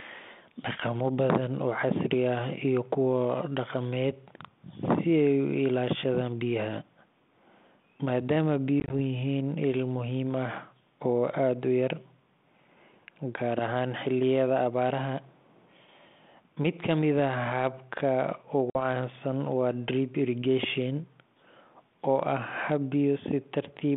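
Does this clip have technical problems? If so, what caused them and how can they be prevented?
Yes. Packet loss on an ADPCM call occurs at 8.80 to 8.93 s, just before "yihiin il muhiim ah", where about 60 ms drops out in short gaps of up to 20 ms spread over 100 ms. It occurs again at 18.70 to 18.82 s, with about 50 ms lost. Each gap is hard-edged silence. Because ADPCM codes only differences from an adaptive prediction, the receiving decoder's predictor and step size drift from the sender's, and speech resumes slightly distorted until they resynchronise. The narrow telephone band and its light coding grain fit 32 kbit/s G.726. Prevention: use a more reliable link or jitter buffering with packet-loss concealment, and reset the decoder state cleanly after losses.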